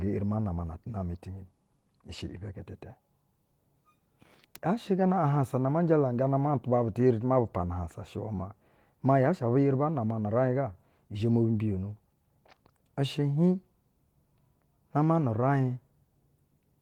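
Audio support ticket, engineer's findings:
Speech signal checked throughout with no technical faults found, so no component or mechanism to flag and no action needed on the audio path.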